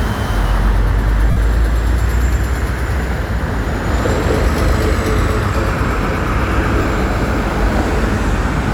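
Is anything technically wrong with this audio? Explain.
Yes. Lost LE Audio frames occur at 1.31 to 1.37 s (about 52 ms) and 6.81 to 6.85 s (30 ms). The LC3 decoder refilled each gap with the previous spectrum, randomly sign-flipped, so tonal content blurs into a noisy smear rather than the hard silence or click of a plain dropout.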